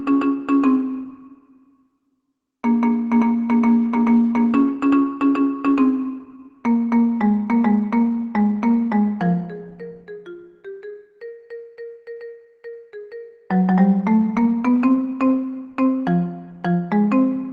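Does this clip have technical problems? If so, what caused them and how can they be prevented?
Yes. The sound carries clock drift between sender and receiver. The sending device's clock runs fast, by something around 5 percent, so audio arrives quicker than the receiver plays it out and its jitter buffer keeps filling. The receiver has to discard material to hold latency steady, which leaves small timing irregularities scattered unevenly through the sound rather than at fixed intervals. Prevent it by locking both ends to a shared clock or by using adaptive resampling to absorb the rate mismatch.

The consequence is a run of repeated timing corrections from 0.09 s to 17.52 s. To stay in step with a sender running at about 105 percent speed, the receiver keeps cutting short pieces out of the stream. All the edits go in the same direction but at uneven spacing. Each cut is small and comes across, if at all, as a faint hiccup or a slightly unsteady tempo rather than an obvious dropout. 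Prevent it with smooth, continuous resampling in the receiver's playout instead of discrete cut-based buffer adjustment.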